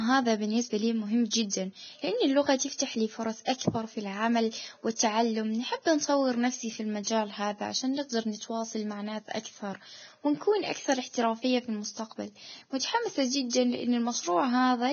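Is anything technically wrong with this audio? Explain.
Yes, there are two faults. Throughout the speech, heavy Vorbis compression is likely: nothing remains above 6.5 kHz, and the upper band turns hissy and grainy, consistent with a bitrate near 17 kbps. At 12.79 to 12.81 s, pre-echo adds a 25 ms hiss before a sharp onset, because the codec spread its block's quantisation noise into the quiet moment ahead.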